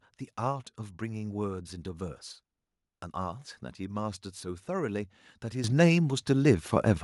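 A speech recording with a microphone volume stepped up at 5.64 s: the level jumps by about 10 dB in a single step, lifting the voice and the background noise floor together. That points to the call software raising the device's input volume automatically after judging the microphone too quiet.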